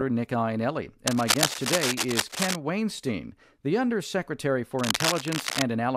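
A worn cable, connector or control being handled is the likely cause of the cable scratch noise in this speech clip. Its contact resistance fluctuates rapidly, adding dense, irregular bursts of crackle to the signal. This happens twice, from 1.07 to 2.56 s and again from 4.76 to 5.63 s. Each time, a scratchy, rustling layer sits over the speech at roughly the same loudness as the speech itself.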